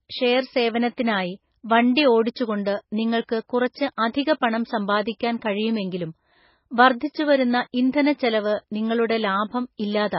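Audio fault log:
Throughout, MP3 compression, likely at a very low bitrate, leaves nothing above about 5.5 kHz, so the speech sounds dull, watery and swirly as weak detail flickers in and out.
7.73 s, pre-echo: a hiss about 11 ms long runs ahead of a sharp attack, because the codec spread its block noise before the onset and smeared it.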